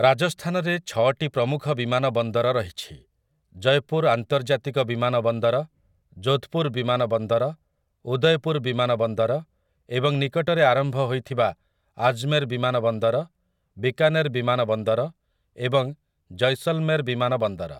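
No technical faults can be heard anywhere in this speech recording. Nothing in it breaks up, drops out or shifts in level or pitch from one moment to the next.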